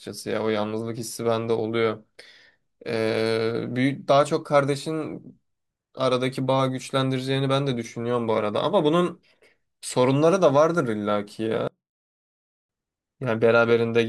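From 11.68 to 12.69 s the speech falls by about 28 dB to a faint residue. The likely cause is one channel inverted: with one side's polarity reversed, speech common to both channels cancels in the mono sum.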